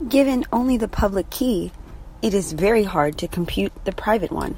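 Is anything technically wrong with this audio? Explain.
Yes. From 0.44 s to 4.24 s the speech carries word clock ticks, about seven of them, recurring roughly every 0.7 s. The receiving device runs on its own clock rather than locking to the sender's digital link. As the two clocks drift apart by a few tens of parts per million, they periodically slip, and a single sample is dropped or repeated. Each slip is a sharp click. On a spectrogram the ticks appear as thin, evenly spaced vertical broadband lines, and on the waveform as tiny step discontinuities.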